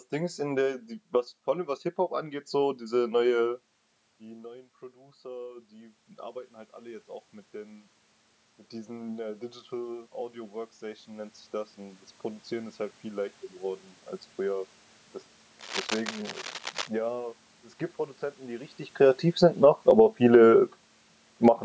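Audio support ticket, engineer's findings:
Automatic gain rising, 4.47–13.43 s: level climbs slowly, about 13 dB, after input dropped about 19 dB when the talker moved back near 3.5 s. Room noise swells with the speech, so it is AGC gain, not talker movement.

Cable scratch noise, 15.59–16.89 s: dense, uneven rustling bursts a little below speech level. Likely a worn cable or connector shifting contact resistance. Irregular and broadband, unlike steady room noise or a single click.

Automatic gain falling, 18.99–19.94 s: after the talker moved near 18.5 s, the loud onset sinks about 4 dB in under a second, background dropping too. A movement alone would not pull the room noise down with it.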